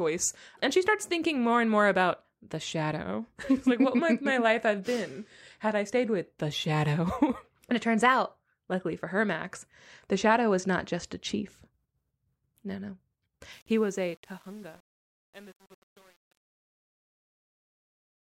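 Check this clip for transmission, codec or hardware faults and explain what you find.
One fault is present: truncation distortion on the fade-out, from 13.53 to 18.37 s, worst from 13.82 s onward. The fade begins at around 13.5 s, but the fading speech is requantised without dither, consistent with an 8-bit word length, so it turns gritty.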